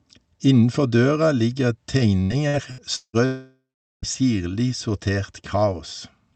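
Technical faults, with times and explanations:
2.23–3.16 s, repeated packet loss (robotic sound): just after "døra ligger", four gaps up to 175 ms are patched by repeating earlier sound, making about 360 ms choppy.
3.25–4.05 s, long network dropout: sound smears into a fading buzz, then about 0.42 s of silence, likely from packets never arriving; audio resumes with that stretch missing.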